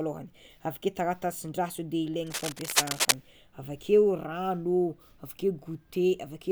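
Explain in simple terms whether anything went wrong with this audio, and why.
Cable scratch noise appears from about 2.27 to 3.14 seconds in this speech: a patch of rough scratching and rustling, roughly as loud as the talking itself. It likely comes from a worn cable or connector being moved, its flickering contact spraying bursts of noise into the signal.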